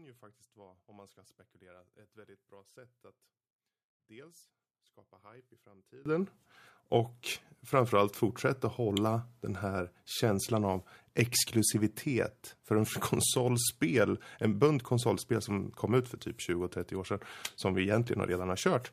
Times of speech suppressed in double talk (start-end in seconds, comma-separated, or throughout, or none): none